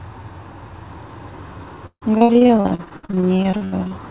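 From 1.86 to 3.93 s comes repeated packet loss (robotic sound): 25 holes, up to 153 ms, each patched by extending the last sound. The result is choppiness rather than silent dropouts.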